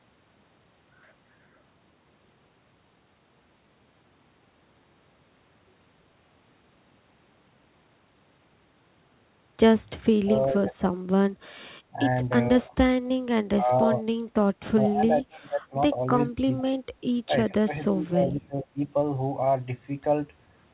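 From 10.1 to 18.83 s the speech keeps dipping, at 10.1, 11.92, 12.52, 13.56, 14.81, 16.29, 17.24 and 17.49 s. The longest dips run about a second. The deepest drop by roughly 25 dB, others only around 5 dB, all within audio band-limited to 4 kHz, which fits a G.711 mu-law call. This is likely speech suppressed in double talk. The echo canceller could not tell this talker from the far-end echo and turned both down.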